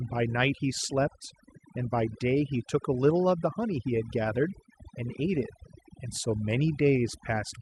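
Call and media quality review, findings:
Overdone noise removal, throughout the speech. Background gated to near silence with twinkling specks; quiet parts of syllables dropping out. Probable component: noise suppressor set too aggressive, zeroing bands near its noise estimate. Unlike codec starvation, the artefacts follow the noise floor, not the bitrate. Top end stops near 12 kHz, which fits a healthy Opus call path at around 40 kbps.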